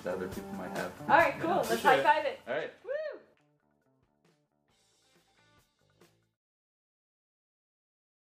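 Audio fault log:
1.81–3.11 s, zipper noise: the level drops by around 25 dB in 1 dB jumps, roughly 20 a second, with no smoothing between them. Each jump leaves a tiny click, so a fast ticking rides on the fade.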